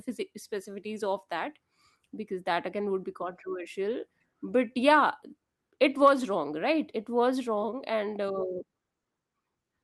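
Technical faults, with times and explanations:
The speech signal shows no technical faults, holding steady and intact throughout.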